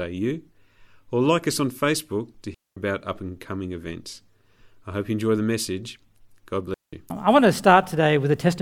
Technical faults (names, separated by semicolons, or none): digital wireless dropout